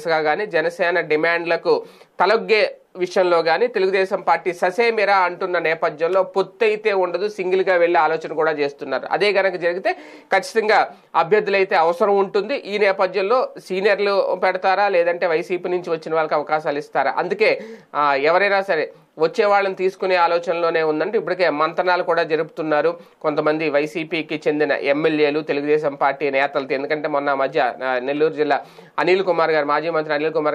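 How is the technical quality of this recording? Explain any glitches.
No glitches are audible anywhere in the recording, so there is nothing to explain.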